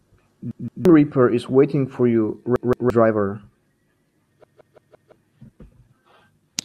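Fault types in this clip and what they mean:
Repeated buffer: fresh audio arrived late, so the device replayed its last block, about 0.17 s long, which fits an 8192-sample buffer. The same fragment of speech recurs with a hard join at each restart: twice extra at 0.51–0.85 s and 2.56–2.90 s, four times at 4.44–5.12 s, skipping roughly a third of a second and then about 0.7 s. Unlike a dropout, nothing goes silent. The sound stutters in a loop instead.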